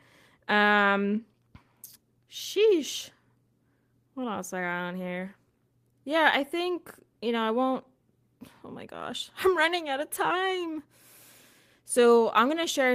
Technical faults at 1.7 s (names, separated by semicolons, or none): none